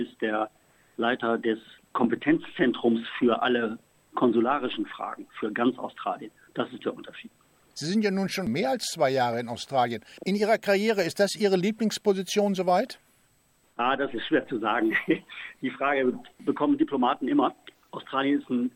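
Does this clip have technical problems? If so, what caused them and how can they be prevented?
Yes. Audio read two samples at a time (double speed) occurs from 17.75 to 17.90 s, a burst of about 0.15 s. Here the decoder treats each pair of consecutive samples as a single frame, as if the stream were stereo or used samples twice as wide. The sound therefore runs at 2x speed and jumps up an octave. To prevent it, make sure the reader's channel count and sample format match the stream's actual header throughout playback.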